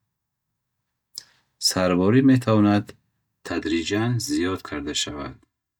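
Channel delay (comb filtering) runs from 3.50 s to the end at 5.79 s. One channel arrives about 3 ms late, and summing to mono cancels shared content at evenly spaced frequencies from around 150 Hz upward, making the speech sound hollow and phasey.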